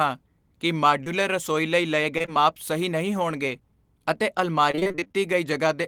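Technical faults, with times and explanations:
1.03 to 1.08 s, short concealed packet loss: about 20 ms of the stream arrived too late for the decoder, and the receiver bridged the hole by extending the preceding sound for roughly 25 ms before easing back into the real signal. The result is a brief smear or wobble.
2.18 to 2.29 s, short concealed packet loss: three back-to-back losses, each fitting a 20 ms packet, are each patched in turn, so the sound wobbles briefly.
4.71 to 5.16 s, repeated packet loss (robotic sound): over this stretch, gaps of up to about 24 ms recur one after another, 11 of them. Each is filled by stretching the last sound before the next hole arrives, so about half of this span is synthesized. That constant patching makes the audio choppy, with pieces missing.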